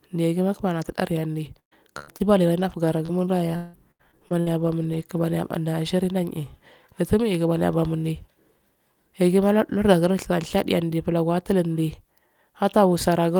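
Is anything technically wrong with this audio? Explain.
Yes. The early part of this speech clip has several kinds of network packet loss, clustered between about 1.45 and 5.2 s.

Lost packet rebuilt from error correction: at 1.45, 2.07 and 2.20 s, a 20 ms frame was lost and replaced by the low-bitrate copy carried in the following packet. Nothing drops out. Instead those instants sound briefly rougher and noisier. That continuity is what separates these from the concealed losses nearby, which patch the hole with guessed sound.

Burst of packet loss: from 1.59 to 1.73 s, about 120 ms of audio never arrived. The receiver extended the last sound and faded it, reaching near silence for about 110 ms, so the sound sags away and resumes further on with that stretch gone. A second, shorter burst at 1.99 to 2.09 s loses about 80 ms the same way. A single continuous hole like this, rather than scattered ones, is what marks a burst.

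Short concealed packet loss: at 2.17 to 2.22 s, a 20 ms packet was missing and filled by continuing the preceding sound, then blended back. It registers as a quick smear or wobble rather than an audible gap. That short length is what separates it from the bursts.

Repeated packet loss (robotic sound): between 2.60 and 5.18 s, six separate gaps totalling about 380 ms, the longest 173 ms, were concealed. Part of this was rebuilt from error-correction copies. Because the patches recur in quick succession, the passage turns choppy, with fragments missing.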